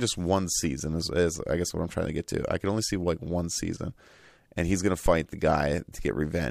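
A phantom power thump lands at 5.06 to 5.13 s, just after "and he's gonna". Switching a supply on or off on a live input sends a sudden DC step through the coupling capacitors, and the preamp passes it on as a low-frequency pulse. Here it is a brief, deep bump in the speech, peaking at about -16 dBFS and dying away over roughly 16 ms.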